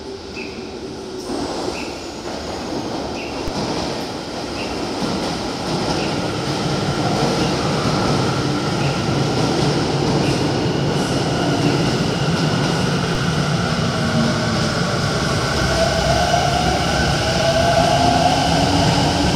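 A DC step occurs at 3.48 s and again at 13.15 s. Each time, the waveform's zero line suddenly jumps by about -12 dBFS, as if an offset had been switched into the signal path. This produces a short, low thump at each point while the sound carries on unchanged. The offset does not hold: it drains away as a 20 Hz high-pass filter pulls the baseline back toward zero.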